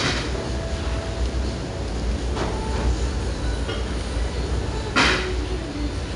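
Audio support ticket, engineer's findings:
Gritty hiss riding every loud sound, throughout the clip; rough distortion on sharp attacks. 4-bit ADPCM compression: coarse adaptive step sizes, error noise tracks signal level. Dull top, nothing above 10.6 kHz, which fits a roughly 22 kHz sample rate at about 89 kbps.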